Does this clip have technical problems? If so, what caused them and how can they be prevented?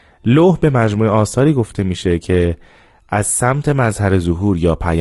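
Yes. Throughout the speech, low-delay AAC compression is plainly audible: short frames blur the pitch harmonics, leaving a rough, grainy texture, which fits AAC-ELD at around 32 kbps. A spectrogram shows smeared harmonics with noise filling the gaps. A higher bitrate would likely prevent it.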